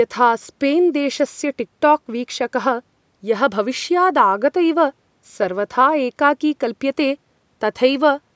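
No faults found in this speech recording; the band-limiting above 8 kHz and the trimmed low bass are normal for call microphone processing.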